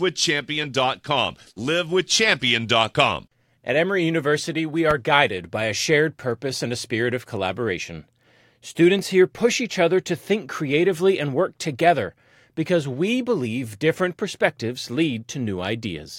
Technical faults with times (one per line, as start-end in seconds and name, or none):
4.91-4.94 loud pop